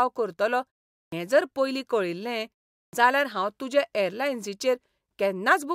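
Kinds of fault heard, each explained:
Clipped start after a pause: The speech jumps in abruptly out of silence twice, with its opening sounds missing. This happens at 1.08 s, at the start of "जर पयलीं कळिल्लें जाल्यार", and at 2.89 s, after "जर पयलीं कळिल्लें" and before "जाल्यार हांव तुजे ऍरलाइनीचेर". Each onset loses about 40 ms. Both follow pauses of roughly 0.45 s, during which the output device went to sleep and then needed time to wake again.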